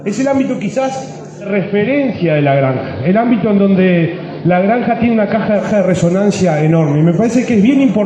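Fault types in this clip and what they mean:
Digital radio blending to analogue: from 1.4 to 5.69 s the receiver lost digital and cross-faded over 148 ms to AM, adding faint hiss.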